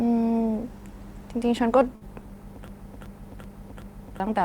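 At 1.95 to 2.03 s, a short stall from a late packet holds one sound for about 60 ms. The waveform shows a smeared, repeated stretch, with nothing lost afterwards. From 2.68 to 4.2 s, a broken-record loop repeats a 0.38 s fragment four times. The spectrogram shows identical blocks back to back. A stalled player or stream is the likely cause.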